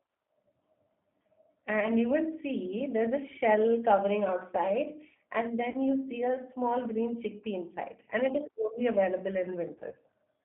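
Throughout, the speech carries G.729 codec damage. The line passes roughly 200 Hz to 3.5 kHz. At 8 kbit/s, each frame is rebuilt from a filter, a pitch predictor and a few pulses. The voice sounds plainly rough and synthetic.

VoIP packet loss, concealed by the speech codec, breaks in three times. At 1.80 s about 20 ms goes missing, which fits one lost packet. At 5.70 s about 40 ms drops, which fits two packets. From 9.75 s to 9.95 s, about 60 ms is lost in short gaps spread over 160 ms. Each time, the decoder stretches the last sound into a fading buzz or coloured noise, and the voice stays weak briefly afterward.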